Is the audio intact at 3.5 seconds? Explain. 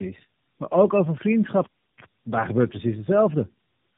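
No, at 3.5 seconds you're hearing tandem speech coding, which runs through the whole clip. The speech sounds like it went through about three low-rate speech codecs in a row, each re-coding the last one's damage, so it's rough, muffled and warbly, with nothing above 3.8 kHz.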